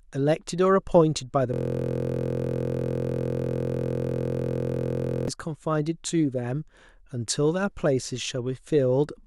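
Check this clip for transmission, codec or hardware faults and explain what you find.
A system hang loop runs from 1.54 s to 5.28 s. The driver stalled while the hardware kept replaying one 23.22 ms buffer, consistent with a 1024-sample buffer, so the speech gives way to a rigid, pitched buzz repeating at 43.1 Hz.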